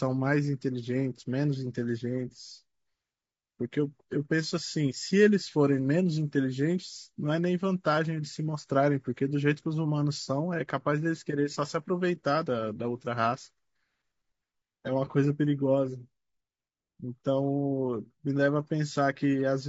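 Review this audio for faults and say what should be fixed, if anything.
Throughout the speech, the voice is plainly rough and grainy, with noise filling the gaps between pitch harmonics and a thin, synthetic top band. The likely cause is low-delay AAC compression: AAC-ELD's short frames resolve harmonics poorly, and the damage fits a bitrate around 32 kbps. Encoding at a higher bitrate, or with a longer-frame codec where latency permits, would prevent it.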